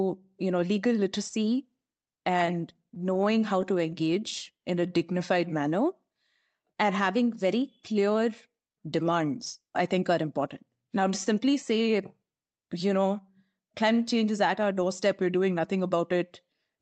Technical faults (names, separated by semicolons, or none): scattered short gaps; jitter buffer slow-down; jitter buffer speed-up